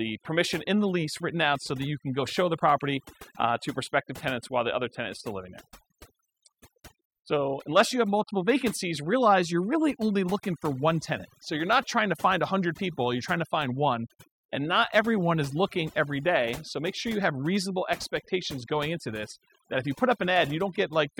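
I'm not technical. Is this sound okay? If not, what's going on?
No. A noise-removal tool was set too strong, so this speech clip has overdone noise removal throughout. It shuts off quiet parts of the voice along with the background noise, leaving near-silent gaps with twinkling specks.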